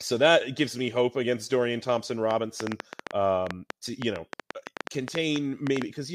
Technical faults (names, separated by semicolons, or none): train of clicks